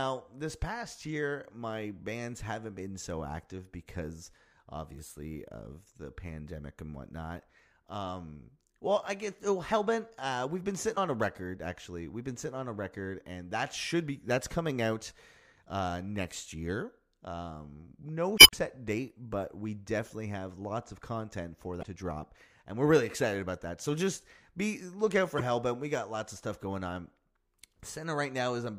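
Damaged data in a compressed stream breaks this speech four times. The first is from 10.93 to 10.99 s, between "we've been" and "a record actually". The longest runs from 18.35 to 18.55 s, just before "date but we definitely", and adds about 66 ms. Another falls between "lots of content for" and "to drop and we're" at 21.79 to 21.83 s, and the last at 25.37 to 25.41 s. Each time the decoder misreads corrupted frames and resyncs.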